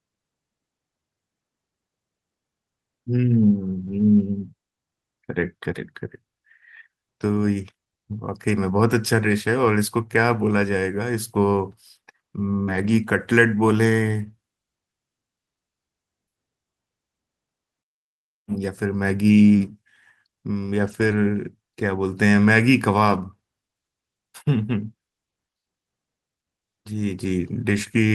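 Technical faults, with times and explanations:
3.87–4.01, 8.51, 12.67–12.93, 14.27, 20.87–21.17 and 23.05–23.15 s, lost packet rebuilt from error correction: lost packets were replaced by low-bitrate copies carried in the following packets, so the speech continues without gaps but sounds briefly rougher and noisier.
12.63–12.69 s, short concealed packet loss: about 40 ms of audio arrived too late, and the decoder extended the preceding sound to cover the gap, producing a short smear or wobble just before the rebuilt stretch.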